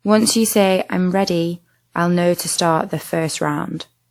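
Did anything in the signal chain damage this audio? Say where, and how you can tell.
Yes. At the codec stage, generation loss runs throughout, likely from about four WMA re-encodes. The swirl, hollowness and blurred attacks exceed what a single pass would produce.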